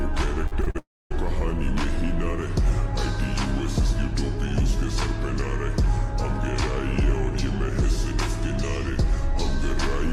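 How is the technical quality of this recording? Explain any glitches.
The recording is marred by two connected network faults near its start.

From 0.47 to 0.76 s there is repeated packet loss, heard as robotic sound. Four short holes, the longest 39 ms, are each patched by extending the preceding sound, so about 37% of that stretch is filler. It sounds choppy, with pieces missing. A spectrogram shows smeared, repeated frames broken by small notches.

Right after, from 0.78 to 1.12 s, comes a long network dropout. About 320 ms of audio never arrives, most likely because the connection stalled. A brief buzzy continuation fades into roughly 250 ms of silence before the sound resumes with that portion gone. The waveform shows a decaying tail, then a flat gap.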